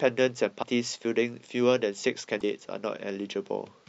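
At 0.62 to 0.64 s and again at 2.39 to 2.42 s, the speech skips forward with a brief glitch. Each lasts about one 26.1 ms frame. The likely cause is a broken MP3 bit reservoir: after a cut, the next frame reads borrowed bytes from the wrong frame.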